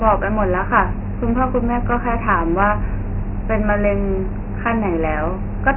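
Speech carrying Dialogic VOX ADPCM damage throughout: a hard spectrogram ceiling at 3 kHz, fitting 6,000-sample 4-bit coding, with heavy gritty hiss riding each syllable and fuzzing the waveform.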